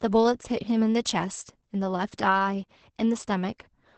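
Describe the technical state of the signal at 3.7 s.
At 3.7 s the speech carries Opus voice compression, present across the whole clip rather than at that moment alone. Nothing sounds above about 8.5 kHz, and the excitation is coded so coarsely that the voice turns muffled, hoarse and faintly robotic, which fits the SILK linear-prediction mode at around 10 kbps. A plain low-pass filter would dull the top without that rasp. The gritty, synthetic buzz in the voice marks heavy coding damage.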